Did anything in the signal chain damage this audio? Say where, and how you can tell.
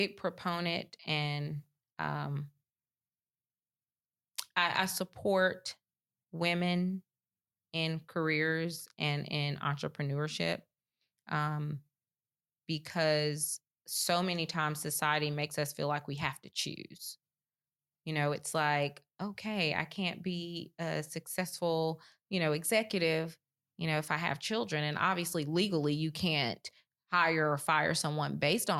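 No, nothing in this speech recording stood out on listening as damage from any stage of the signal chain.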